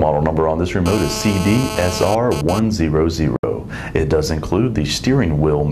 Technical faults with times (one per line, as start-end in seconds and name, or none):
0.86-2.59 GSM phone buzz
3.36-3.44 digital broadcast dropout